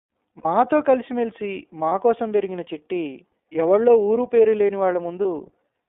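The whole recording passed through the iLBC codec, a narrowband VoIP coder that handles each frame independently. The band is held to roughly 300 Hz to 3.6 kHz, so the speech loses its airy top and sounds boxed in. The coding damage is plainly audible as a rough, slightly synthetic edge on the voice, which fits iLBC's 30 ms, 13.33 kbps mode.

At 0.38 to 0.46 s, about 60 ms of speech went missing, which fits two lost 30 ms iLBC frames. The decoder covers the hole by repeating the last pitch cycle with added noise, so that stretch turns into a held, faintly buzzy vowel. Shorter single-frame losses of about 30 ms follow at 1.89 to 1.92 s and 5.22 to 5.25 s, each a brief smeared sustain. Since iLBC frames stand alone, the voice snaps back cleanly right after every gap.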